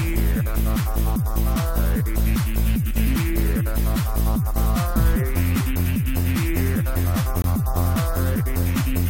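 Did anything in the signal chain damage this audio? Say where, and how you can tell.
Yes, at the codec stage: a corrupt frame muted at 7.42 to 7.45 s. The sound drops abruptly to silence for about 32 ms, which fits a single rejected frame; the decoder discarded the damaged data and the player inserted silence, with timing preserved afterwards.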